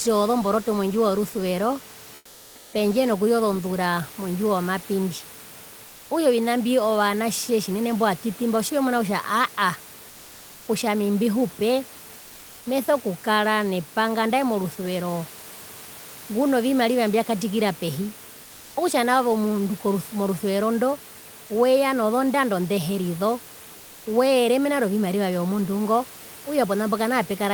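Comfort noise in place of the background appears in four speech pauses: 2.15–2.73 s (0.58 s), 5.87–6.09 s, 12.19–12.65 s and 23.77–24.05 s. Each time, the room noise under the speech gives way to a steady, featureless hiss, about 3 dB quieter in the first gap and about 1 dB in the others. This is likely Opus DTX: the sender goes silent without speech, and the receiver synthesises noise to cover the gap.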